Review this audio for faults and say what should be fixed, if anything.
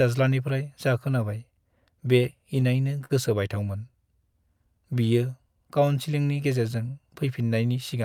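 Repeated stalls (stutter), 2.23 to 3.12 s: late packets emptied the jitter buffer five times, and each gap (longest 45 ms) was bridged by continuing the last sound, so nothing is lost but it drags.

Jitter buffer slow-down, 4.33 to 5.87 s: the receiver repeated single pitch periods to rebuild its reserve, adding 98 ms and playing at 94% speed with unchanged pitch.

Both would be prevented by a steadier network path with less jitter, plus a jitter buffer whose target delay starts high enough to absorb late arrivals.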